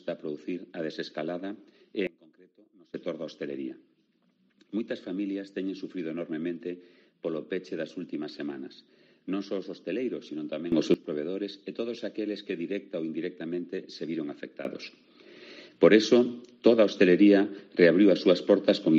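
The audio has three sudden gain jumps. At 2.07 s the level drops by about 24 dB until 2.94 s; at 10.72 s it rises by about 13 dB until 10.94 s; and from 14.65 s to the end it sits about 12 dB higher. The sound and its background noise shift together, so the waveform envelope steps abruptly and the spectrogram brightens or darkens evenly across all frequencies, likely from a gain setting applied instantly without a ramp.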